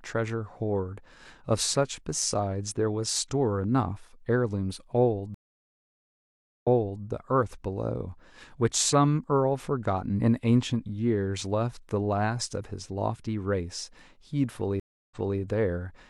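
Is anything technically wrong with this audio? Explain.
Yes, there are two stream reconnects. At 5.34 to 7.04 s the speech stops for 1.28 s, and at 14.80 to 15.39 s it stops for 0.31 s. Each time the connection dropped, and the player reconnected and restarted its decoder mid-stream. The server resent buffered audio, so playback resumes 0.42 s and 0.28 s earlier respectively, repeating a fragment already heard.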